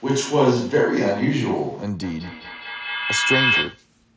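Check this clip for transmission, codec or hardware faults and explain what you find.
Two faults stand out in this speech. From the start to 1.83 s there is a switch to a distant microphone, likely from the close mic dropping out. The sound is roomy and hollow at roughly unchanged level, with room noise about 35 dB under the speech. A spectrogram shows thinner lows and a raised noise floor. From 2.02 to 3.88 s a feedback howl builds. A microphone-to-loudspeaker loop gains on each pass, with a loop delay of about 200 ms, narrowing to about 3 kHz until it peaks around speech level. On a spectrogram it is a bright horizontal line, and the waveform shows a swelling envelope. Throughout, the content stops at 8 kHz, which fits a wideband Bluetooth headset link.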